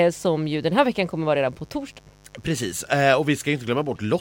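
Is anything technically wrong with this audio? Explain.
Yes, there's mains buzz running under the speech for the whole clip. It's locked to 50 Hz mains, with switching spikes twice per cycle piling up harmonics into the kilohertz range, so you get a steady, raspy buzz sitting roughly 30 dB below the speech.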